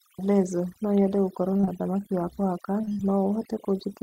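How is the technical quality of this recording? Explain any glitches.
The technical quality is poor, with two problems.

Overdone noise removal affects the whole recording. A noise reducer set too strong is cutting individual frequency bands whenever they sit near its noise estimate, taking quiet speech detail with them. The background drops and breaks up into twinkling specks.

Repeated packet loss (robotic sound) occurs from 1.53 to 1.69 s and again from 2.81 to 3.01 s. Several short dropouts follow in quick succession, the longest about 21 ms and 29 ms respectively. Each one is patched by extending the preceding sound, so about half of each stretch is filler. The speech turns choppy there, with pieces missing.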